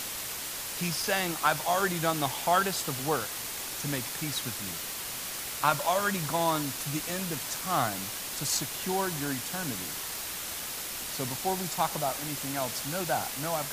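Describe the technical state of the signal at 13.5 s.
At 13.5 s, as throughout the clip, low bit depth with dither: the speech is quantised to about 5 bits with dither, leaving a steady, even hiss nearly as loud as the speech itself.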